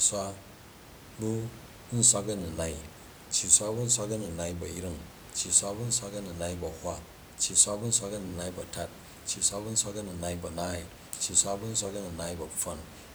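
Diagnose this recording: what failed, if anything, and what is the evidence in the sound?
Nothing in the signal chain has failed: the speech comes through intact at every stage, and the only other sound is the room's own background noise, sitting about 19 dB below the speech, which belongs to the recording environment rather than the system.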